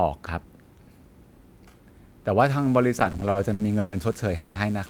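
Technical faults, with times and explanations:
2.40 to 4.90 s, mains buzz: a steady raspy 60 Hz buzz sits roughly 30 dB under the speech, with spiky harmonics from switching interference leaking into the signal path.
2.99 to 3.94 s, repeated stalls (stutter): the jitter buffer kept running dry, giving ten stretched gaps totalling 310 ms, longest 130 ms. Nothing's lost, but it drags.
4.36 to 4.57 s, call audio freeze: the sound hangs for about 190 ms as a fading continuation, then resumes where it stopped, likely packets held up in transit.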